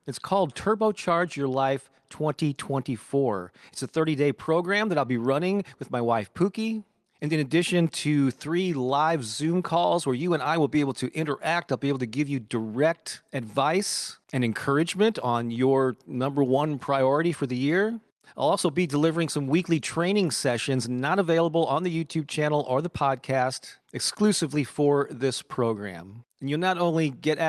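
Nothing stood out on listening to this clip.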